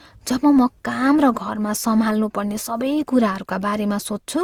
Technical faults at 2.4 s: generation loss

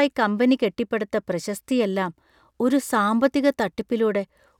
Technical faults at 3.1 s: none

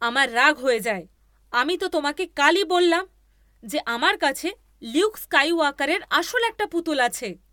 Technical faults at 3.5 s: none

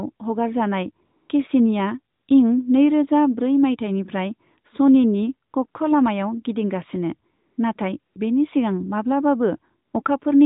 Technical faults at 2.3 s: AMR comfort noise

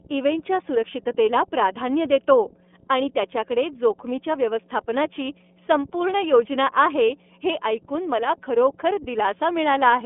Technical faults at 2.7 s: mains hum; iLBC codec

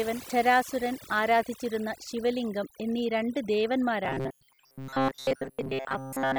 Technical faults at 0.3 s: overdone noise removal; damaged data in a compressed stream

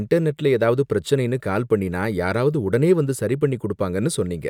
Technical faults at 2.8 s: none

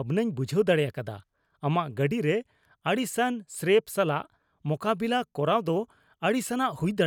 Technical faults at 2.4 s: none

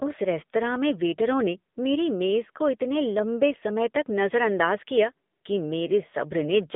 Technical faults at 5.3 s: AMR narrowband mobile codec

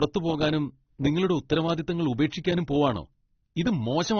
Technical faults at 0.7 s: transcoding between lossy codecs

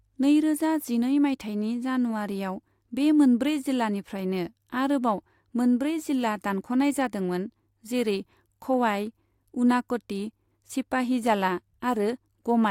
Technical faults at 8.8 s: none

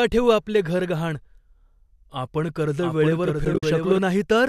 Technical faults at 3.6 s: doubled audio track; AAC frame loss with muting

